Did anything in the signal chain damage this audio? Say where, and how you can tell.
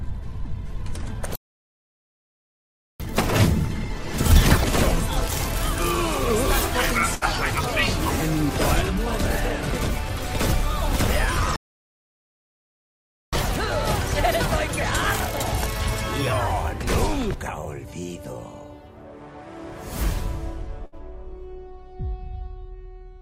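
Yes. The audio is interrupted twice at the playback stage. It goes silent from 1.36 to 3.00 s, about 1.64 s, and again from 11.56 to 13.33 s, about 1.77 s. Each time the sound stops mid-flow and then resumes. This is a playback stall. The likely cause is that the player's buffer ran dry or its output thread was blocked, so nothing reached the output until it recovered.

Each stall is followed by catch-up at higher speed, again in the player. From 3.00 to 4.64 s the audio runs at 2.0 times normal speed and sits roughly ten semitones sharp. From 13.33 to 16.33 s it runs at 1.1 times, a semitone or two high. Both then drop back to normal. The player is resampling its backlog faster to recover the time lost in the stall, which raises pitch and tempo together.

There are two short bursts of packet loss from the network path, at 7.15 to 7.24 s and 20.86 to 20.95 s. In each, the preceding sound is held for about 60 ms and fades as concealment stretches the last good packet. 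The audio then jumps ahead, with roughly 60 ms of material missing. The receiver is bridging a run of lost or late packets and then discarding the gap rather than replaying it.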